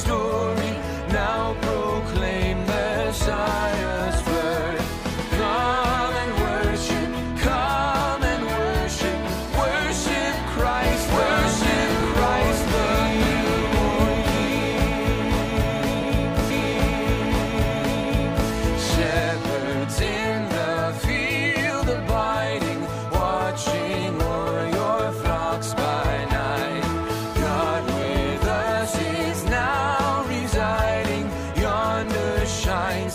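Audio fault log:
4.00, 8.01, 12.01, 16.02, 20.03, 24.03, 28.04 and 32.05 s: overlapping chunks. The audio was handled in 4.0 s blocks, each starting 6.5 ms before the previous one ended, so that sliver plays twice at every join. This produces a brief click or stutter every four seconds.
10.8 to 19.2 s: doubled audio track. A full-band copy of the sound trails the original by about one and a half seconds at roughly the same level. It has no decay or room colour and starts and stops abruptly, likely from a second, slower capture path mixed in.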